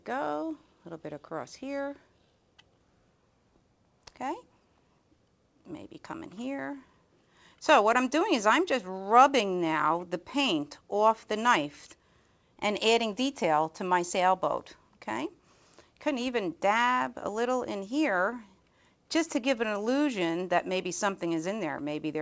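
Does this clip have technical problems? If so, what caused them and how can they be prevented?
No, nothing in this audio stood out as a technical problem on listening, and the high-frequency content stopping around 8 kHz is just what the G.722 call path it travelled through normally delivers.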